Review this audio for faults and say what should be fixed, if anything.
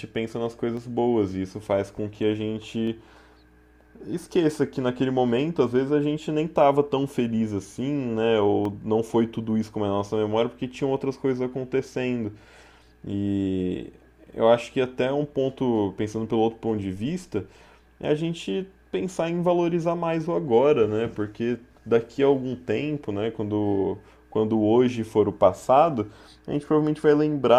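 Three sharp single clicks at 0.77, 2.87 and 8.65 s in the speech, likely dropped samples: well under a millisecond goes missing, so the waveform jumps abruptly. Give the recording chain more buffer headroom so it never skips samples under load.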